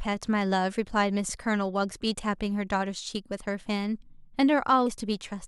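At 1.28 s and 4.86 s, damaged data in the compressed stream throws the decoder out of sync, producing a brief glitch in the speech.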